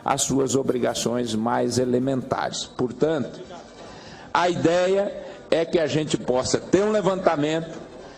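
From 2.51 s to the end, an adaptive stream drops to a lower bitrate: treble suddenly stops at 8.6 kHz, with rising codec smear and no gap, which suggests roughly 96 down to 32 kbit/s AAC.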